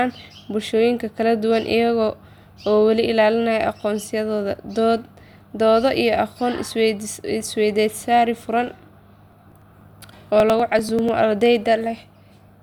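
From 9.32 s to 11.09 s the speech carries periodic USB or driver dropouts: every 0.098 s a tiny slice, roughly two milliseconds, is skipped outright as the bus or driver stalls, so the speech picks up a regular ticking, about ten per second, across that stretch.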